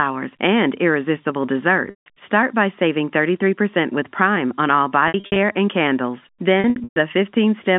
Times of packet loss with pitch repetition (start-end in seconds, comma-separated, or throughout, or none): 1.90-2.06, 5.08-5.36, 6.60-6.96